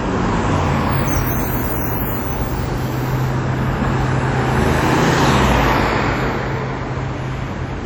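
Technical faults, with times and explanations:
Throughout: WMA compression, likely from encoding at a low bitrate, which fits something around 48 kbps. The damage is plainly audible. The sound rings and smears, and a hiss rises and falls with the signal, because a transform codec spreads quantisation noise across each long block and zeroes weak components. On a spectrogram, faint detail breaks into patchy holes and blocky smears around transients, while energy still reaches about 20.1 kHz.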